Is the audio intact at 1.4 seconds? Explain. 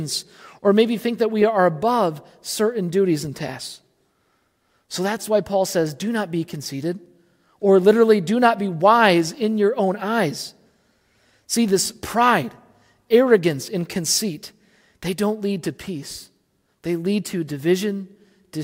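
Yes, at 1.4 seconds the speech plays through cleanly with no audible fault.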